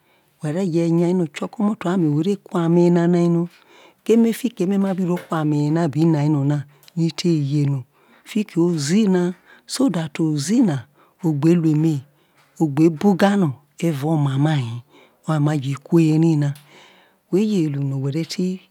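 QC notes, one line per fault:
No audible faults found.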